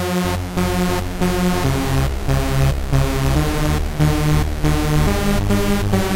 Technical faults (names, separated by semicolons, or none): none